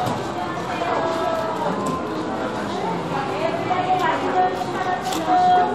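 A recording of sounds, with no technical fault to be heard. Nothing in it calls for a time stamp or a cause.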